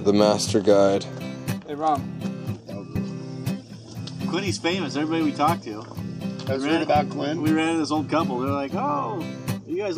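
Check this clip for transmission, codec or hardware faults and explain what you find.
Nothing in the clip points to a fault. The sound stays steady throughout, with no break, distortion or change in character anywhere along its length.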